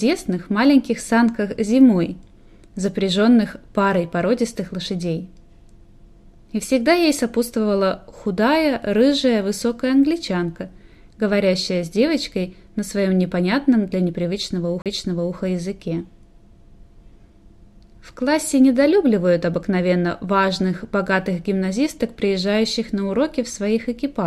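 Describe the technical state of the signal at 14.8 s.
At 14.82 to 14.86 s there is a CD skip: the laser lost its track and landed on another turn of the spiral, so a tick and a mute of about 40 ms are followed by sound resuming from a different point. Unlike a plain dropout, the audio does not pick up where it stopped but jumps forward or back.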